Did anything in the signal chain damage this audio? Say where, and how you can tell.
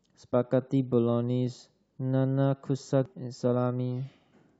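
Yes. The damage sits at the codec stage, in the compressed stream itself. At about 3.06 s there is a single brief glitch in the speech, only a few milliseconds long. That is damaged data in a compressed stream. Some bytes in the encoded file were corrupted. The decoder misread that frame, lost sync and jumped to the next valid frame header. The short glitch is the sound of that garbled frame.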